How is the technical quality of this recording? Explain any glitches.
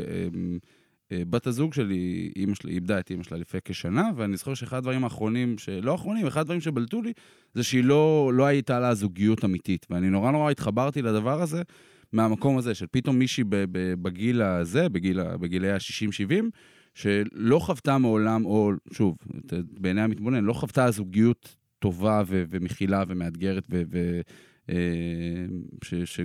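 No audible technical faults detected.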